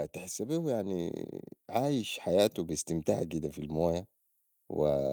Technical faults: automatic gain rising

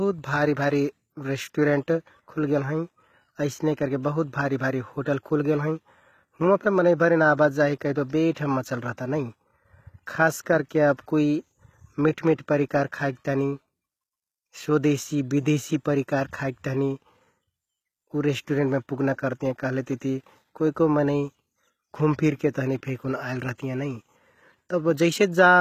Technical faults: HE-AAC compression; pre-echo

